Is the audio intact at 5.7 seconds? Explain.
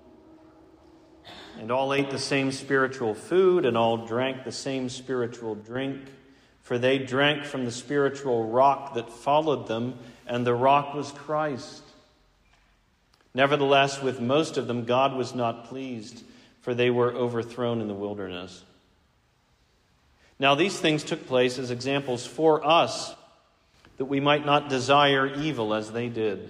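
No. From 5.62 to 5.76 s, one channel drops out: the sound abruptly falls by about 6 dB for 140 ms, then returns to full level. The likely cause is that one stereo channel went silent, so anything shared by both channels is halved once the two are summed to mono, and anything carried only in the lost channel vanishes. On a waveform this appears as a sudden step down in amplitude; a spectrogram shows a uniformly dimmer band across all frequencies for that span.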